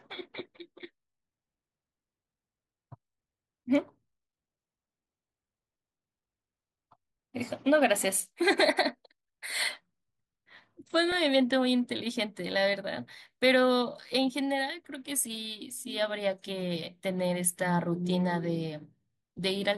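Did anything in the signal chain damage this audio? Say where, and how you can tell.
Yes. DAB burbling at the codec stage mars the speech at 11.12 s and from 16.66 to 16.73 s, with short blips of noise in single sub-bands. Uncorrected reception bit errors corrupted the MP2 audio data. Unlike packet loss, nothing drops out.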